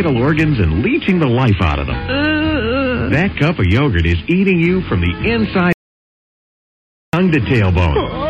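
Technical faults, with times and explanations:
5.73 to 7.13 s, audio dropout to silence: the sound stops abruptly mid-flow and returns just as abruptly about 1.41 s later, with no room tone or background noise in between. Dead silence like this likely comes from the input being lost, through a disconnect, failed link or mute, while recording carried on. On a waveform the trace collapses to a flat line; on a spectrogram the band is empty black edge to edge.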